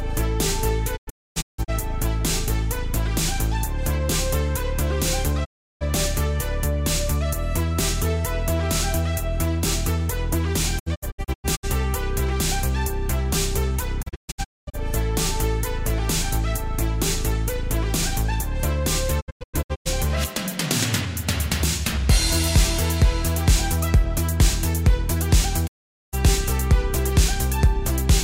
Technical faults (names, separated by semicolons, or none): digital broadcast dropout